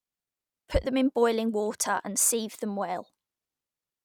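No audible faults in this speech.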